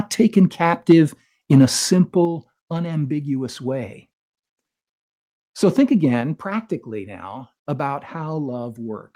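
Microphone overload at 0.89 to 0.93 s: peaks push about 3 dB past the converter's ceiling, likely from input gain set too high, so around a tenth of the samples there are flattened, giving a harsh, crackling edge.

Microphone volume stepped down at 0.92 s by about 2 dB, then again at 2.25 s by about 6 dB. Each is a sudden drop in level, likely the call software cutting the device's input volume, the first just after the clipped peak.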